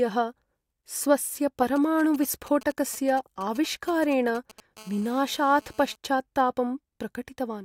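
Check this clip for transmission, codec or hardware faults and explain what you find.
Two bursts of radio interference from a nearby 2G phone are present.

GSM signalling bursts, 1.76 to 4.60 s: a handset exchanging short control bursts gets rectified by the audio circuit, producing galloping ticks and brief 217 Hz buzzes roughly 20 dB below the speech.

GSM phone buzz, 4.77 to 5.96 s: the phone, now transmitting continuously as in a call at 217 bursts per second, yields a steady raspy, harmonic-rich 217 Hz buzz about 27 dB below the speech.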